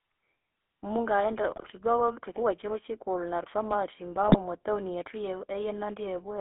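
The clip is speech carried throughout by the GSM full-rate codec. The band runs only from about 300 Hz to 3.5 kHz. The codec damage is plainly audible as a buzzy, gravelly roughness. This comes from rebuilding the voice from a vocal-tract model driven by sparse pulses, consistent with a 13 kb/s stream. GSM bit errors strike twice, from 1.56 to 1.71 s and from 4.28 to 4.36 s, just before "mwatown yethu". Corrupted filter, pitch and gain values reach the decoder. The voice breaks into squawks, pops and gargling. The rate points to roughly 2.5 percent of bits flipped.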